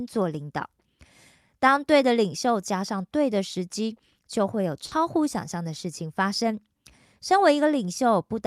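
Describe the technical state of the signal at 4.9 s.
At 4.87 to 4.93 s there is short concealed packet loss: about 40 ms never arrived, and the decoder extrapolated the preceding speech, leaving a brief smear before rejoining.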